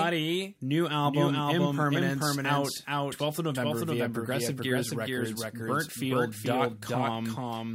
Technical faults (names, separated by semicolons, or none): doubled audio track